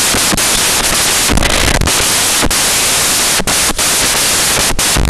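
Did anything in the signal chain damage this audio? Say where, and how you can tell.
Yes: sample-format conversion built samples from the wrong bytes, so throughout the speech, low bits became the high bits, producing loud, harsh noise that is close to white on the louder speech.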